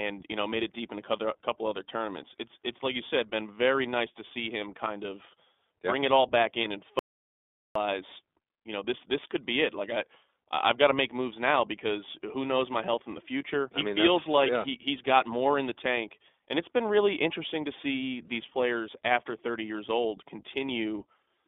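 The whole speech clip has gone through the iLBC codec. The band is cut to roughly 250 Hz to 3.6 kHz, and there's a plainly audible rough, slightly synthetic edge, which fits iLBC's narrowband mode at about 15.2 kbps with 20 ms frames.

At 6.62 to 6.65 s there's a single lost iLBC frame. About 20 ms goes missing, and the decoder fills it by repeating the last pitch cycle with some noise, so you get a tiny buzzy, held blip. Because each frame decodes on its own, the voice snaps back right away.

Then from 6.99 to 7.75 s there's an audio dropout to silence. For about 0.76 s the sound cuts to silence, with no room tone at all. Whatever was said in that stretch is simply gone. The likely cause is the input dropping out while the recording carried on.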